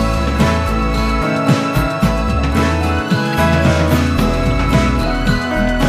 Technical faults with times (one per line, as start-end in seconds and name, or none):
3.33 corrupt frame decoded